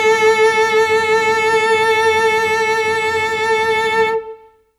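From 0.00 to 0.93 s a train of clicks ticks regularly over the music at 6.5 per second, about seven pulses as loud as the music, likely interference.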